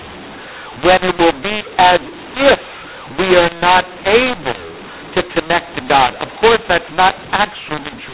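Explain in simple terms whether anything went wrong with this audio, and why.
A mu-law and A-law mix-up runs throughout: telephone audio coded one way was decoded the other, scrambling loudness so speech turns harsh and pauses hiss.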